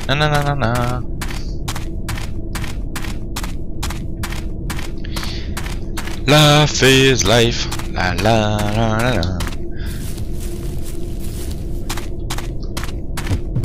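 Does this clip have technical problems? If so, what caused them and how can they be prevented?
Yes. A gain stage was driven past its ceiling, about 6 dB over at 0.11–0.84 s, about 16 dB at 6.29–7.48 s and about 12 dB at 8.01–9.23 s, so hard clipping flattened the peaks, adding high-frequency harmonics. Keep input gain low enough to leave headroom.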